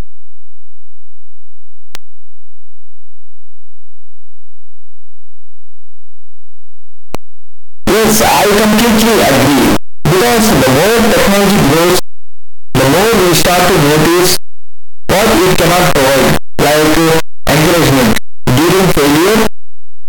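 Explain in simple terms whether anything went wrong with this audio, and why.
Something went wrong. The 8-bit samples were likely read with signed and unsigned mixed up, so the top bit of every sample is flipped. Each time the speech crosses silence it jumps across the full range, giving loud, harsh distortion for all 20 seconds, with quiet moments blaring like loud ones.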